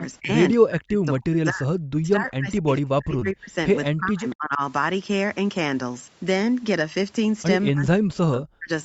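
From 0.2 to 0.3 s the sound dips by about 15 dB. Then from 0.57 to 3.56 s it is pushed down in pieces, by about 40 dB at the deepest, for roughly two seconds in total. The likely cause is speech suppressed in double talk: the echo canceller turned the talker down while the far side was also speaking. On a waveform the envelope collapses in chunks, and a spectrogram shows holes.

Within that stretch, at 3.19 to 3.23 s, there is a short concealed packet loss. About 20 ms of audio never reached the decoder, so it extended the preceding sound before blending back. This is heard as a brief smear, and on the spectrogram it appears as a small patch that looks too smooth and regular.

From 3.93 to 4.61 s the level drops again by about 35 dB, with the same likely double-talk suppression cause. At 4.30 to 4.35 s a faint echo leak appears, with residual loudspeaker echo that the canceller likely missed. 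It is a copy of the sound delayed by 241 ms and about 30 dB below it, visible as a weak repeat of earlier energy.

From 7.7 to 8.7 s the audio is cut by about 40 dB, again likely double-talk suppression, and the waveform is left nearly flat. Throughout, the spectrum stops at 8 kHz, as the call codec's bandwidth would give.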